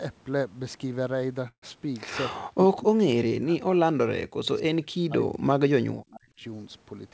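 At 1.48 s the speech stops and a call audio freeze fills the gap until 1.64 s. The last sound carries on briefly as a fading buzz or hiss, then about 90 ms of silence follows before the speech resumes where it left off. Nothing is lost, but 144 ms is inserted and everything after it arrives later. The likely cause is delayed packets draining the jitter buffer, so the receiver had nothing new to play.

Speech suppressed in double talk then appears three times: 2.41 to 3.09 s, 3.30 to 5.48 s, and 5.94 to 6.42 s. In each stretch the talker dips, thins or breaks up in fragments. The deepest drops are about 40 dB in the first two spans and about 30 dB in the last. This is likely the echo canceller mistaking the talker for loudspeaker echo while the far end was also speaking, and attenuating the near-end signal along with the echo.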